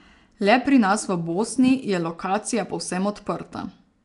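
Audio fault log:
Throughout: Nellymoser compression, likely from a Flash-era codec starving weak bands of bits and filling them with noise, leaving the speech rough, hissy and smeared, with nothing above 10.6 kHz.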